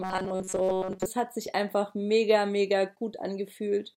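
From 0.01 to 1.06 s, ending just before "hat sich einfach mega", robotic sound from repeated short buffers gives the speech a rigid metallic buzz at 188 Hz, likely from a roughly 5.3 ms segment being replayed over most of that stretch.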